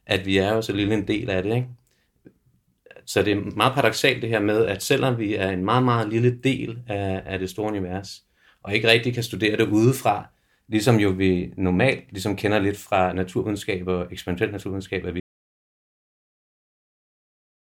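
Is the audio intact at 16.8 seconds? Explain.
No. At 16.8 s you're inside an audio dropout to silence that starts at 15.2 s and runs to the end of the clip. The speech cuts off mid-flow into silence with no room tone, likely because the input was lost while recording carried on.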